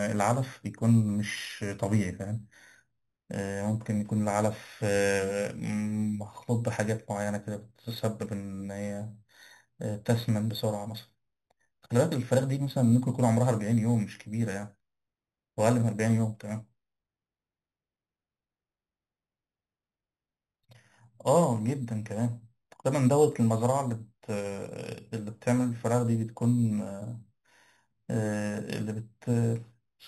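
Throughout, imaging from sample-and-hold upsampling mirrors the speech into 4 to 8 kHz, about 20 dB down. It fizzes metallically, fitting an 8 kHz source.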